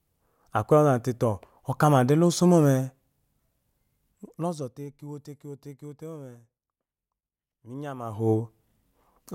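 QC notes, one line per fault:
No faults found in the speech.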